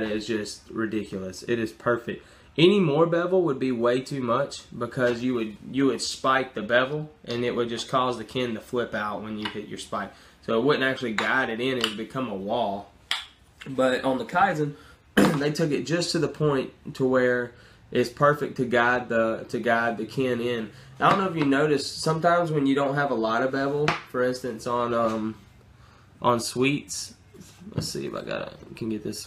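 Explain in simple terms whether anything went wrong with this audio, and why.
Nothing went wrong; no faults can be heard.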